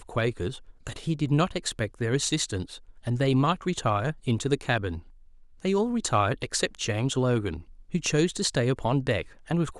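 From 0.10 s to 9.79 s the speech carries clock slip clicks, faint ticks roughly every 0.07 s that blur into a soft rattle. They likely come from two unsynchronised clocks drifting around 400 ppm apart, with each slip dropping or repeating one sample. Their steady spacing sets them apart from random crackle.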